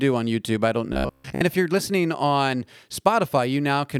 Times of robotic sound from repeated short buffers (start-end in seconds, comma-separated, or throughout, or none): 0.93-1.42